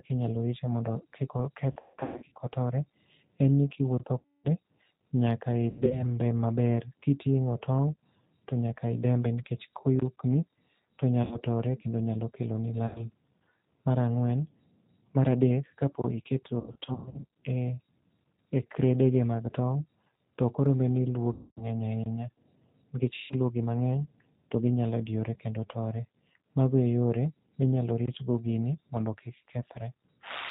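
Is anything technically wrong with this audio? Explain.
Yes. Three kinds of fault are audible.

The whole clip is coded with the G.729 codec at 8 kbit/s. This speech codec rebuilds each 10 ms frame from a vocal tract filter, a pitch predictor and a few pulses. Nothing above 4 kHz survives. The speech sounds muffled, slightly rough and synthetic throughout.

VoIP packet loss concealed by the speech codec occurs eight times: 1.72–2.33 s, 4.20–4.47 s, 5.71–6.06 s, 11.23–11.41 s, 12.87–13.04 s, 16.60–17.35 s, 21.33–21.65 s and 23.16–23.35 s. The decoder fills missing frames by extending its last pitch and filter with falling gain. The result is a buzzy, fading smear. The worst spots, near 1.7 s and 16.6 s, each lose about 420 ms in scattered runs of up to 140 ms and 120 ms respectively. The voice stays weak and distorted even after audio returns.

A gap between chunks appears at 10.00–10.02 s, 16.02–16.04 s and 28.06–28.08 s. 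Each is a 20 ms silence. The joins fall on a 6 s spacing, which points to audio delivered in 6 s chunks with padding or a late start at each boundary. Nothing is lost there, but the sound is briefly cut.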